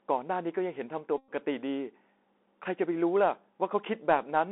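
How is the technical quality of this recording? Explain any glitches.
The recording has poor technical quality, with narrowband distortion throughout and one glitch.

Across the whole clip the Bluetooth CVSD headset codec limits the speech to roughly 250 Hz to 3.6 kHz, which fits 64 kbps one-bit delta coding. Its adaptive step can't track loud high sounds, so sibilants turn scratchy over a granular hiss, unlike the smooth dullness of plain band-limiting.

From 1.18 to 1.32 s a Bluetooth headset packet is repeated. Lost packets are refilled with the previous packet's bits every 3.75 ms, so about 105 ms of sound becomes a steady buzz near 267 Hz rather than a silent gap.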